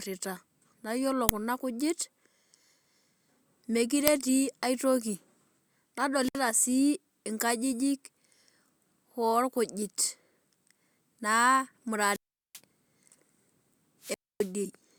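At 1.29 s, between "naa iyiolo" and "kuna kujit", and again at 4.08 s, just before "etii aitoki", a sharp, loud crack lasts only a couple of milliseconds. This is an uninitialised buffer: a block was played before any audio was written into it, so stale memory came out as samples. The two bursts fit 128-sample and 64-sample blocks. From 6.16 to 6.45 s, 12.09 to 12.60 s and 14.01 to 14.52 s the speech sinks into hiss, falls to near silence, then returns. These are wireless microphone squelch dropouts, where the analogue FM link faded until the receiver's squelch muted its output, for about 64 ms, 387 ms and 263 ms respectively.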